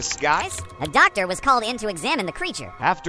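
From 0.42 to 2.82 s the sound runs fast and high, a wrong sample rate fault. It plays 1.38 times too fast, raised about 5.5 semitones. Speed and pitch shift together. That fits 16 kHz audio played at 22 kHz without conversion.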